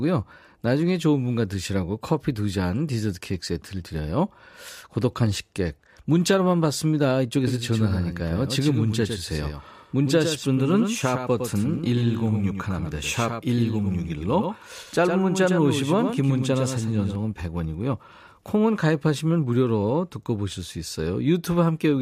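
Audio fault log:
7.47–17.15 s: doubled audio track. The speech gains a hard, slapback echo, a second full-band copy about 100 ms behind and roughly 5 dB quieter, with no decay or room colour, switching on and off abruptly, likely from a second capture path or misaligned edit.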